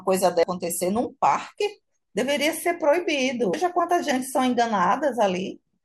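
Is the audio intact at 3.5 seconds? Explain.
No. At 3.54 s there is damaged data in the compressed stream: corrupt bytes make the decoder lose frame sync, giving a brief blip.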